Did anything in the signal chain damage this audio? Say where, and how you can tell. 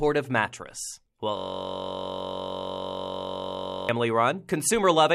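Yes. From 1.37 s to 3.89 s the sound stops moving and turns into a steady, low buzz pitched near 47 Hz. It is one 21.33 ms fragment repeating exactly, more than a hundred times over. This is a system hang loop at the driver or buffer stage: the host froze while the audio hardware kept replaying the same ring buffer. The fragment length fits a 1024-sample buffer.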